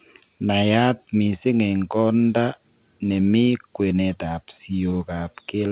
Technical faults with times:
none

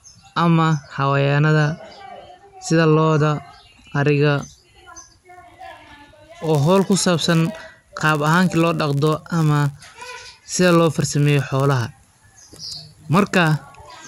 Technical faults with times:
4.39-14.08 filter restarted on every block

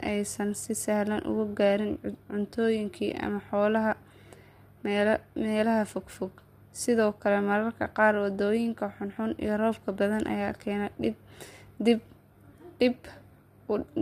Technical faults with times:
0.00-14.01 low-delay AAC compression

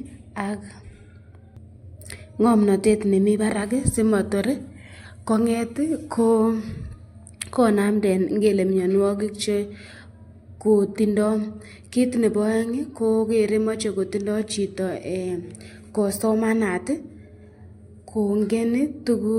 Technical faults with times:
none

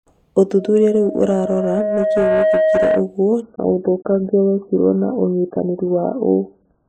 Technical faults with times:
0.58-3.15 loudspeaker feedback squeal
3.42-6.88 adaptive stream at a lower bitrate

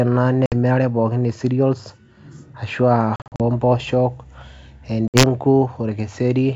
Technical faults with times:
0.46-0.54 packet loss on an ADPCM call
3.16-3.41 packet loss on an ADPCM call
5.08-5.24 packet loss on an ADPCM call

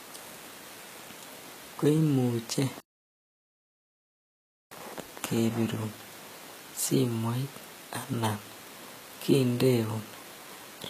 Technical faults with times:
0.00-10.90 HE-AAC compression
2.80-4.71 playback stall

